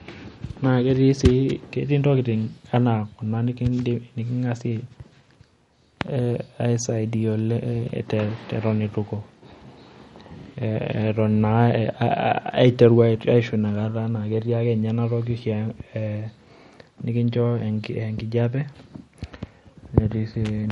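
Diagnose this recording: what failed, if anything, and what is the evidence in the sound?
The codec stage failed, most likely from MP3 compression at a low bitrate, around 48 kbps. Throughout the speech nothing survives above 11.1 kHz, and weak spectral detail flickers in and out, leaving a watery, swirly texture on sibilants and smeared consonant onsets.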